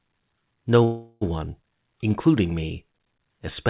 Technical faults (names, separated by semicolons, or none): call audio freeze